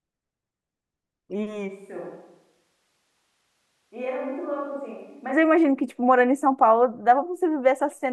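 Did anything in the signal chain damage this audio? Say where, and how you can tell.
Yes, at the capture stage. From 1.7 s to 5.31 s the speech turns roomy and hollow, with thinner bass. The level drops by roughly 10 dB. A room noise floor appears, around 40 dB below the speech. Both changes are abrupt, going in and coming out. This is a switch to a distant microphone. The close microphone's feed likely failed or was dropped, leaving a mic farther from the talker that picks up more room.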